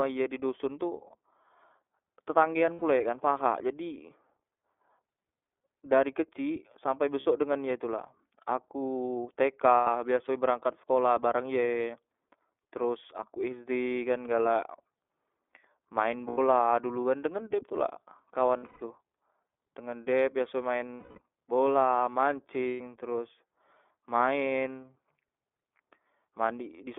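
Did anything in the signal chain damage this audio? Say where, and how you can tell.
Yes. The speech sounds band-limited to roughly 300 Hz–3.5 kHz, slightly rough and synthetic throughout: the iLBC codec at 13.33 kbps discards everything above the narrowband line.

Brief held, buzzy vowel sounds replace speech at 2.73, 7.2, 9.75, 14.43, 16.28, 18.57, 20.94 and 22.68 s. These are lost iLBC frames on the network, which the decoder concealed by repeating the last pitch cycle.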